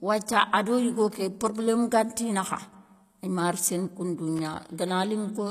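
HE-AAC compression runs throughout the speech. The treble is likely rebuilt by spectral band replication, with lower bands copied upward under a coarse envelope. This leaves s sounds gritty and metallic, with plainly audible damage, nothing above 14.9 kHz, and a bitrate of roughly 24 kbps.

Loose connector crackle occurs from 4.36 to 4.39 s. A worn or dirty contact briefly makes and breaks, chopping the signal for 32 ms. It is heard as a short, irregular burst of scratchy crackle.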